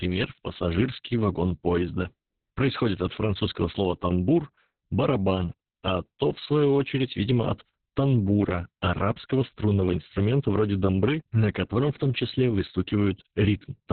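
From start to finish the speech carries Opus voice compression at a very low rate, which fits about 6 kbps in the SILK linear-prediction mode. Nothing survives above roughly 4.3 kHz, so the speech sounds muffled, hoarse and faintly robotic, unlike plain low-pass filtering, which dulls without that coarse, buzzy roughness.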